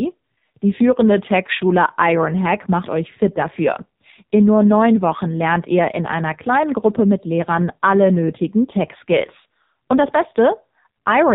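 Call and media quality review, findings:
AMR narrowband mobile codec, whole clip: speech band-limited, buzzy and synthetic. Spectrogram shows a hard ceiling at 4 kHz with smeared harmonics. Probable component: AMR-NB encoder on the mobile leg. Heavy damage fits a low mode near 5.9 kbps, with too few excitation pulses per 5 ms subframe.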